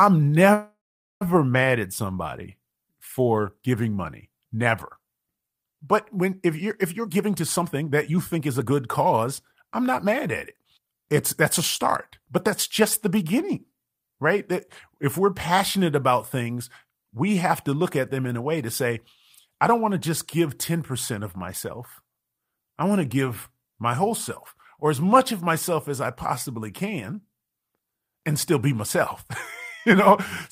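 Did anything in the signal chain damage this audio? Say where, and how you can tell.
Yes. At 0.53 to 1.23 s there is a call audio freeze, likely from network packets held up until the jitter buffer ran dry. The last sound is stretched into a fading buzz, then about 0.44 s of silence. On a spectrogram that looks like a horizontal smear into blank columns. Speech resumes where it stopped, so nothing is lost but the delay grows by 0.68 s.

Jitter buffer speed-up follows in the receiver's buffer stage. From 6.98 to 11.09 s the speech runs at 115% and sheds roughly 0.7 s. From 12.81 to 13.86 s it runs at 105% and sheds roughly 70 ms. Pitch stays unchanged, so spectrogram harmonics hold their spacing while syllables compress in time. The waveform shows pitch periods spliced out repeatedly.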